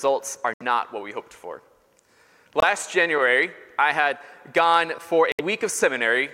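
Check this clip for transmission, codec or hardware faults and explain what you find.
Three brief silent gaps, at 0.54–0.62 s, 2.60–2.64 s and 5.32–5.41 s, are a likely Bluetooth dropout. Packets missed their delivery window, so the output went silent for about 70 ms, 23 ms and 70 ms, fitting three, one and three lost frames. The sound then resumes further along, as if it had played on.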